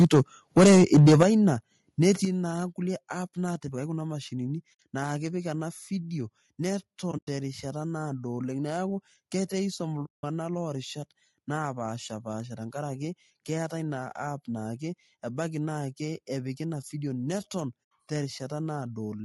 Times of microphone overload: 0.00-0.20, 0.57-1.23

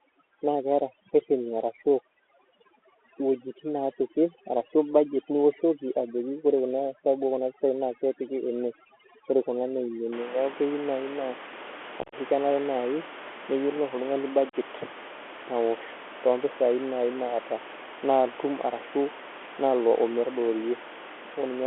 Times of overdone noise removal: 0.00-10.12

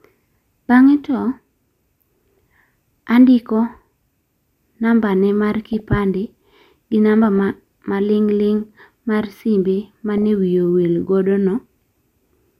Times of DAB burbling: 2.38, 5.66-5.98, 7.24-7.38, 10.02-10.24

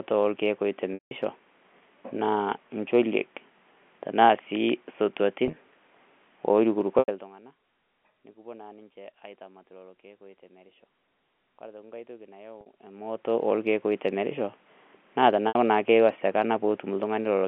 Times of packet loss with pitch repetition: 0.94-1.11, 5.46-5.56, 6.99-7.08, 12.61-12.66, 15.48-15.55

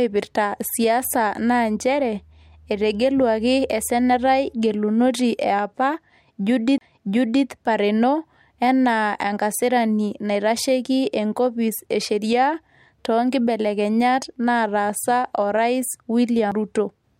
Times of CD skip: 6.78-6.81, 16.51

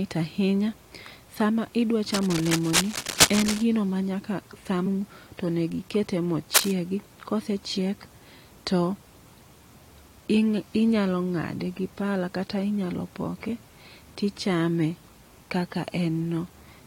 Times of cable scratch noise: 2.14-3.63, 6.53-6.71

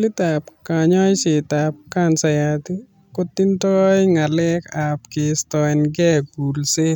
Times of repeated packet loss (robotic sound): none

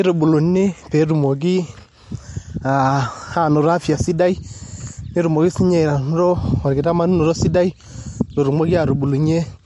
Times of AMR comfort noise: none

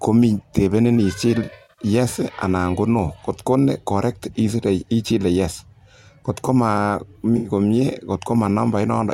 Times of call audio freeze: none

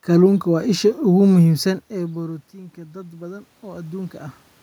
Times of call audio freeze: none

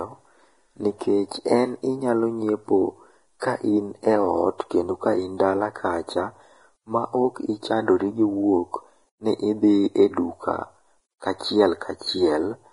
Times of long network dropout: none

